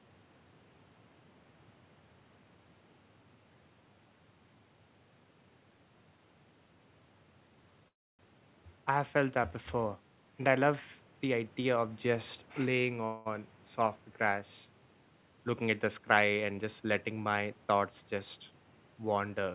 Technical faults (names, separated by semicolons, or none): call audio freeze; jitter buffer speed-up